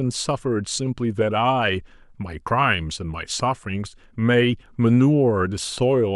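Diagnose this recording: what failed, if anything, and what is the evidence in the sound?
Nothing failed in this recording, and the sound gives no evidence of any fault at any stage.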